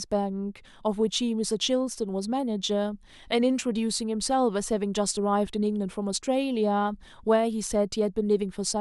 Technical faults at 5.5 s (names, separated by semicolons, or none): repeated buffer